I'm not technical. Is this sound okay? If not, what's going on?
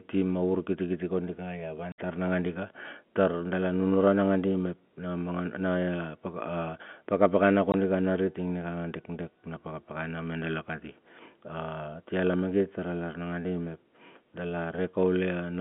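No. The speech has two brief gaps from packet loss filled with silence: parts of the signal were lost on the way, and silence was played instead. The holes, with hard edges, fall from 1.92 to 1.98 s, which fits three lost 20 ms packets, and from 7.72 to 7.74 s, which fits one.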